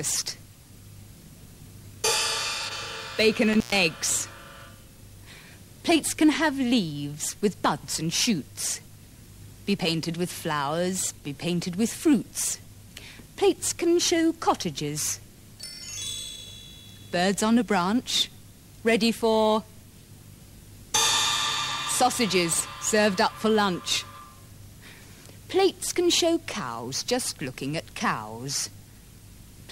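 Audio missing between chunks occurs at 2.68, 7.66, 12.64, 17.62 and 22.60 s, skips about 5 s apart where roughly 20 ms of sound vanishes and the two sides butt together without silence, likely from a recorder or processor losing a sliver each time it closes one 5 s chunk and opens the next. Intermittent contact appears from 3.53 to 3.79 s, where a loose cable or plug briefly opens and the sound drops out for about 120 ms, with crackle at the edges as the connection breaks and remakes.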